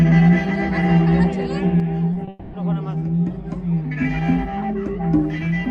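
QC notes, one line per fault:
1.80–5.70 s, one channel drops out: the level falls abruptly by about 6 dB at 1.80 s and stays down to the end with no other change in tone. This is likely one stereo channel lost, leaving the mono sum with only half its identical content.
2.13–2.17 s and 2.25–2.29 s, short concealed packet loss: two brief smears where about 20 ms of audio failed to arrive each time. The receiver bridged each hole by extending the preceding sound, then blended back into the real signal.
2.29–2.55 s, long network dropout: right after the second short loss, the sound is carried on as a synthetic continuation of the last sound for about 240 ms with no silent stretch. This is likely a longer network gap, and the audio resumes at 2.55 s without the missing portion.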